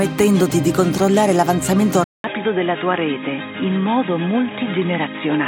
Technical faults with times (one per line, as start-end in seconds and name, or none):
2.04-5.47 input switched to a poorer device